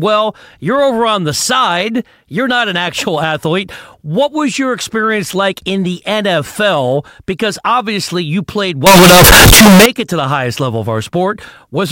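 From 8.86 to 9.86 s, after "obviously you played" and before "it to the highest", the speech turns into a near-square blast at an almost fixed high level with background noise as loud as the talker, though pitch stays traceable. This is likely float read as integer: 32-bit float samples interpreted as 32-bit integers.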